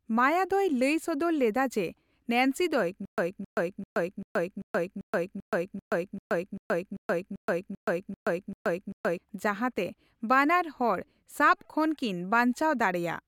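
A speech clip in which playback likely stalled from 3.05 to 9.18 s, producing a stutter with silent gaps: a 266 ms fragment replays 15 times, each followed by about 126 ms of digital silence, repeating every 391 ms while the intended audio is lost.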